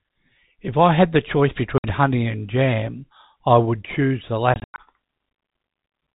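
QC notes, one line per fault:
1.78–1.84 s, packet loss filled with silence: a 60 ms hole with hard edges where missing packets were replaced by silence, which fits three 20 ms packets.
4.54–4.78 s, packet loss filled with silence: 160 ms of dropouts scattered over 240 ms, the longest 100 ms, chopping the speech with abrupt edges.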